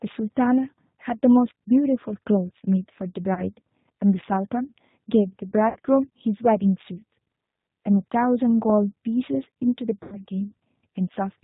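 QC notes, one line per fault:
Throughout: G.729 codec. The sound is band-limited with nothing above 4 kHz and has a plainly rough, synthetic texture. This points to an 8 kbit/s G.729A stream, which rebuilds each 10 ms frame from a vocal tract filter, a pitch predictor and a handful of pulses.
3.34–3.43 s, 5.69–5.78 s, 10.03–10.18 s: VoIP packet loss concealed by the speech codec. Gaps of 30, 60 and 90 ms (fitting one, two and three lost packets) are filled by the decoder stretching its last pitch and filter into a fading buzzy tone or coloured noise. Weak, distorted sound lingers briefly afterwards while the frame-to-frame state recovers.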